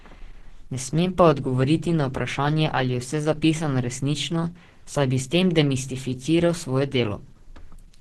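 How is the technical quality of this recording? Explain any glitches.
The quality is poor throughout. For the whole clip the speech sounds hoarse, grainy and muffled, with nothing above 12.1 kHz. This is likely heavy Opus compression in its hybrid speech mode, where a tiny bit budget, fitting about 12 kbps, narrows bandwidth and replaces fine detail with noise.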